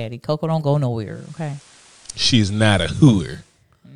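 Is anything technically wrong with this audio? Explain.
Yes. From 0.95 s to 3.66 s there is digital radio blending to analogue: the receiver lost the digital stream and cross-faded over about 0.46 s to the FM broadcast. The speech drops about 2 dB and gains a faint hiss well below the signal.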